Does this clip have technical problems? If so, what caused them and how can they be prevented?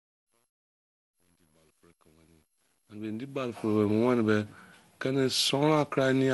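Yes. Throughout, the speech sounds swirly, hollow and smeared, with nothing above 11.9 kHz; this is likely generation loss from around ten successive MP2 encodes, consistent with 96 kbit/s. Keep a lossless master and encode only once.

From 0.00 to 3.80 s, during the fade-in, there is truncation distortion on a fade. The quiet start is gritty, worst from 0.00 to 2.89 s, which fits a gain stage keeping only about 10 bits without dither. Apply fades at high resolution and dither when reducing word length.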